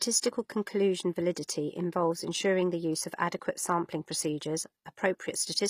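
A speech clip with plainly audible codec damage all the way through, likely HE-AAC compression at a low rate, something like 24 kbps. The treble is rebuilt from copied lower bands, so sibilants turn gritty and metallic, and nothing reaches above 15.5 kHz. There's also pre-echo at 1.35 s, right before "involves ensuring the use": about 15 ms of hiss smeared ahead of the attack, because the block's quantisation noise spills into the quiet moment before it.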